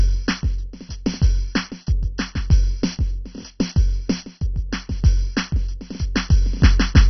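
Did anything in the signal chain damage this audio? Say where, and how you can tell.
Yes: the music sounds dull and gurgling throughout, with nothing above 6.1 kHz. This is likely MP2 compression at the codec stage, with starved upper sub-bands switched off, consistent with a very low bitrate around 32 kbps.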